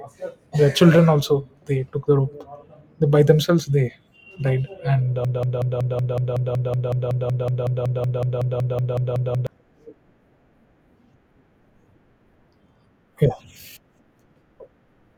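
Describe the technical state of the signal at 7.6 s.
At 7.6 s the signal is stuck in a broken-record loop running from 5.25 to 9.47 s: a fragment of about 0.19 s repeats exactly, back to back, 23 times, and the speech that belonged in those four seconds never arrives. The likely cause is a stalled player, encoder or stream re-sending its last buffered chunk. On a waveform or spectrogram the same small block tiles identically at a steady 0.19 s spacing.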